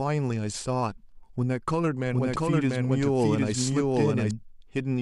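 From 2.06 s to 4.31 s a doubled audio track runs, a second full-band copy about as loud trailing by around 0.7 s, likely from a second capture path. At 2.35 s compressed frames were skipped: the audio jumps ahead by roughly 70 ms, consistent with three 24 ms frames.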